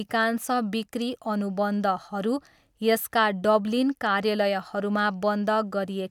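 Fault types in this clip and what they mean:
No fault types can be heard in this clip.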